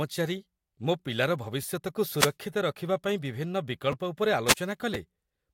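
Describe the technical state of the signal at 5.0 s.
Right around 4.94 s there's a brief case of chunks out of order: one chunk of about 5.33 ms shows up a chunk late and plays after its neighbour. Nothing's missing, but the swapped order leaves three hard joins, so you get a tiny jumbled moment in the speech.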